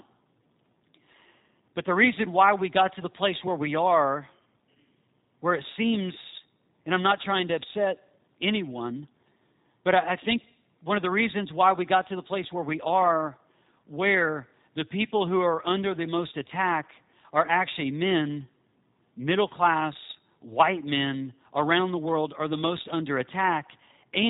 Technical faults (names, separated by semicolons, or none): G.729 codec